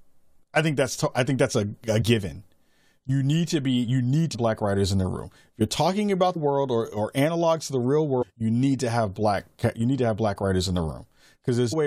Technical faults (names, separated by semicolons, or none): damaged data in a compressed stream